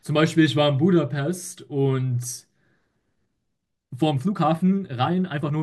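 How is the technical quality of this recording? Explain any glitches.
The recording has one glitch. From 3.55 s to the end, a time-stretched section runs about 1.44 times faster, sounding rushed. It is likely caused by software squeezing the audio while keeping the pitch. Unlike a simple speed-up, the pitch doesn't rise.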